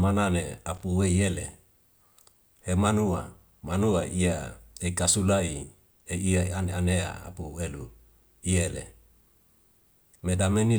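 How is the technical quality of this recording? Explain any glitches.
The recording has one audible glitch: a burst of loose connector crackle from about 0.75 to 0.84 s. A worn or dirty contact somewhere in the signal path was making and breaking as it shifted, chopping the audio on and off. It comes across as a short, irregular scratchy crackle over the speech. On a waveform it shows as jagged dropouts and spikes. On a spectrogram it appears as scattered broadband vertical streaks across that window.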